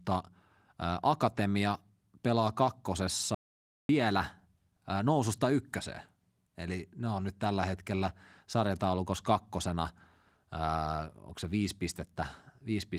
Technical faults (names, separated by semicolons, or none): audio dropout to silence